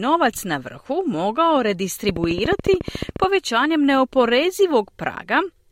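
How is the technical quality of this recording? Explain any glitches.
The recording has one clear glitch, a train of clicks. From 2.09 to 3.25 s, right after "na vrhu mogao", about fifteen sharp ticks arrive at a steady 14 per second, peaking roughly 10 dB above the speech. The cause is likely a repeating electrical pulse, such as interference from nearby equipment or a faulty connection or power supply. It sounds like even popping laid over the sound. A spectrogram shows evenly spaced vertical broadband lines, and the waveform shows a row of narrow spikes.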